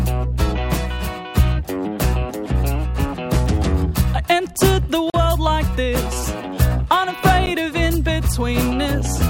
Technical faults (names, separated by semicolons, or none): block of digital silence